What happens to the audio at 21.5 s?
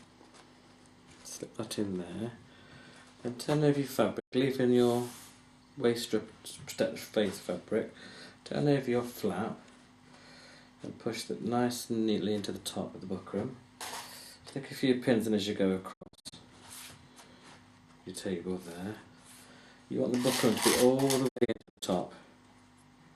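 Between 21.27 and 21.84 s the receiver lost frames and muted until good ones returned, a digital broadcast dropout. The sound breaks into several short silent holes, each fading out over 20 ms, the longest 72 ms, with 312 ms missing in all.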